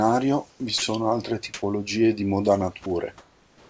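Comfort noise in place of the background, 0.50 to 0.60 s: the room background between speech sounds is likely swapped for synthetic noise generated at the receiver after the sender stopped transmitting. The real background's texture gives way to a flat, featureless hiss about 6 dB quieter. It recurs at 1.54 to 1.62 s, where the fill comes out about 21 dB louder, and from 3.18 s to the end, about 2 dB quieter.

Sound dropped by the voice detector, 0.78 to 0.82 s: the sender's voice detector likely misjudged part of the speech as background and stopped sending, so 40 ms of speech is replaced by the same steady noise. The speech briefly thins out and snaps back. A shorter 20 ms gap follows at 2.84 to 2.86 s. Throughout, the wideband call path has nothing above 8 kHz.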